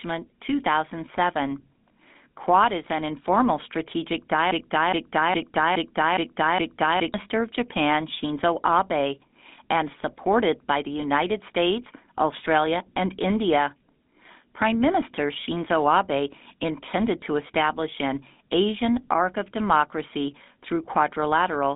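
GSM full-rate codec, throughout: the speech carries the buzzy, gravelly roughness of this early vocal-tract model, which rebuilds the voice from sparse, regularly spaced excitation pulses at a rate that fits 13 kbps. The damage is plainly audible, the band sits near 200 Hz to 3.6 kHz, and nothing passes above 3.8 kHz.

Broken-record loop, 4.51 to 7.14 s: right after "is an informal strategic", a 0.41 s fragment repeats six times back to back, and the speech that belonged in that stretch never arrives. The likely cause is a stalled player or stream resending the last piece it held.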